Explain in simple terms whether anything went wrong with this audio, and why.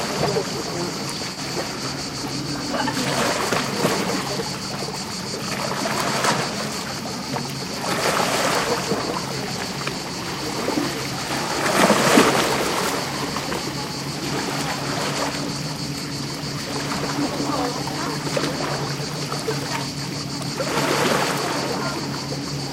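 At 1.33 to 1.38 s, AAC frame loss with concealment: about 43 ms of data went missing and the decoder guessed the gap, leaving a brief smeared, noisy patch.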